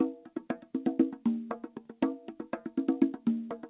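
There are no technical faults to describe in time order; the audio simply has the narrow band of a telephone-style call path, with nothing above 4 kHz.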